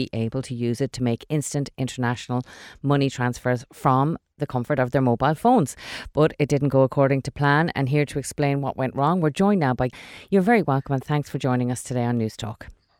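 A speech clip, and right after "we're joined now by" at about 9.92 s it jumps ahead with a little blip, likely a stream segment skipped.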